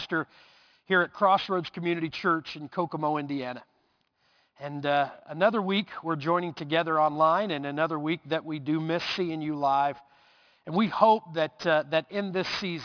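Aliasing runs through the whole clip. The rate was lowered, which fits a drop from 48 kHz to 11 kHz, with no filtering first, so content above 5.5 kHz folds back as unrelated, gritty tones roughly 20 dB down. A clean band limit would just sound dull instead.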